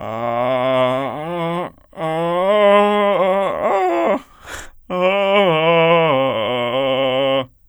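A music recording with no technical faults to report. Nothing in it calls for a time, a value or a cause.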